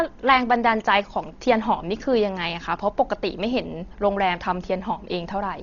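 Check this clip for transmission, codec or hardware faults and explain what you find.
There's one problem, and it runs through the whole clip: heavy codec damage that sounds like Dolby Digital compression at a very low rate, likely around 32 kbps. Nothing survives above about 6.9 kHz, so the speech sounds dull, and many frequency lines got no real bits and were filled with noise. That leaves a rough, fluttering haze around the voiced sounds.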